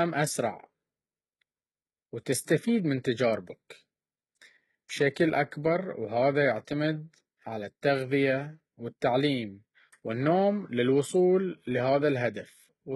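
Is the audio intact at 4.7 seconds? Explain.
No. At 4.7 seconds, as across the whole clip, there's heavy damage that sounds like HE-AAC compression. Nothing comes through above 11.8 kHz, and the treble is likely rebuilt by copying lower bands upward, so s sounds come out gritty and lispy. That fits a very low bitrate of around 16 kbps.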